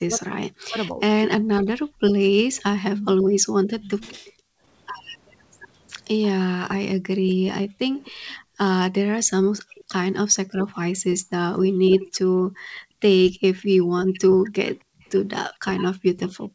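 From 0.05 to 3.9 s the talker's speech dips and breaks up in pieces, about a second in total and at worst some 40 dB down. This is likely speech suppressed in double talk, where the echo canceller cannot separate the talker from the loudspeaker echo and turns both down. From 1.89 to 2.01 s the background is gated by the echo canceller, and the room sound drops by about 14 dB before it returns. From 2.96 to 4.32 s a delayed copy of the voice trails 259 ms behind at about 10 dB below the speech. This is likely an echo leak, where one side's canceller let part of its loudspeaker pickup through. The background is gated again from 4.32 to 4.63 s, this time dropping by about 36 dB. From 6.18 s to the end, the speech again dips and cuts out by as much as 40 dB, likely renewed double-talk suppression. The same 259 ms echo returns from 7.97 to 10.16 s at about 25 dB below the speech, likely further leakage. 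From 13.58 to 15.1 s it is barely present at about 40 dB down, likely the same leak fading.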